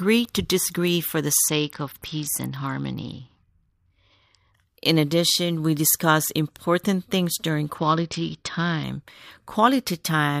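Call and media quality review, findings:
Bluetooth SBC bit pool drop, 1.45–4.54 s and 7.78–8.84 s. Speech turns dull with gritty noise, then recovers. Component: A2DP SBC encoder on a congested link. Sound fits the bit pool falling from 31 to about 8, near 66 kbps. Top sub-bands get almost no bits, so treble dulls. Remaining bands are coarsely quantised, producing the grit. Same signature both times.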